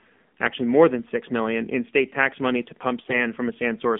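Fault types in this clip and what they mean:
AMR narrowband mobile codec: the speech passes through a 2G/3G phone codec at 7.4 kbps. Only about 150 Hz to 3.5 kHz survives, giving a thin, boxy sound with a constant buzzy, synthetic edge. A plain band-limit would stay thin but natural.
AMR bit errors: from 3.06 to 3.27 s, just after "state tax money to", corrupted frame bits misplace the pulses driving the voice model. Pitch and level hold, but the voice turns hoarse and gargly. A dropout or concealed frame would go silent or smeared instead.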